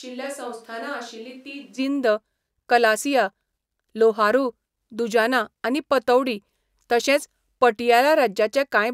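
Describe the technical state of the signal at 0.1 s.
A switch to a distant microphone is under way from the very start until 1.77 s. The speech sounds roomy and hollow, thin in the bass, about 10 dB quieter, with room noise well below it, likely because a far-off pickup replaced the close microphone.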